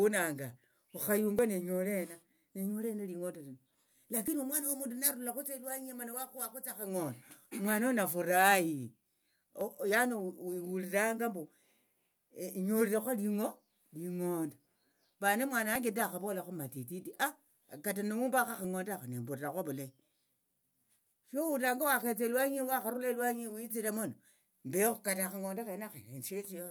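Five quick jump glitches in the speech at 1.39, 4.28, 9.61, 15.76 (just before "ndahavolakho matititi") and 18.65 s (between "kata nihumbakho" and "akha nembulirakho ovulayi"). They're likely dropped buffers from an overrun: roughly 10 ms of audio goes missing each time, about twice that at 4.28 s.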